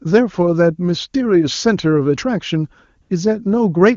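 From 3.01 to 3.09 s the background briefly changes character: for about 80 ms the room sound is swapped for a smooth, steady hiss that switches in and out abruptly. This is AMR comfort noise. The phone judged the talker silent, stopped sending speech frames, and the receiver filled the gap with synthetic noise built from a rough description of the background's level and spectrum. The speech around it carries the clean, wideband quality of AMR-WB, which fits its highest bitrate.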